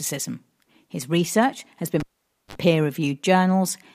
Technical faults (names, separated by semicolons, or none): cable pulled and plugged in